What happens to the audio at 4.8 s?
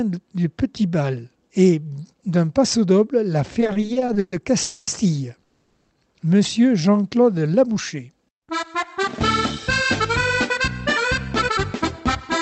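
From about 4.62 s to 4.88 s the sound stalls: the last moment before the stall is stretched into a buzzy, hissy continuation that fades over roughly a quarter of a second without reaching silence. Then the audio picks up exactly where it left off, with nothing lost, just 250 ms later than before. This is a call audio freeze, likely from packets held up in transit, leaving the receiver's jitter buffer empty and forcing it to fill the gap.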